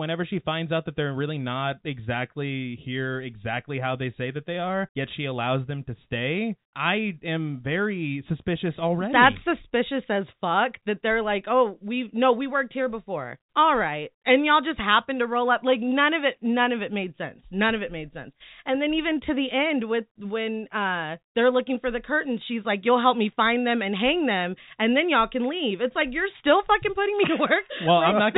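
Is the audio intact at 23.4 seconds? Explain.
Yes, the speech at 23.4 seconds is intact, with nothing at that moment beyond the usual narrowband telephone character of G.711 coding.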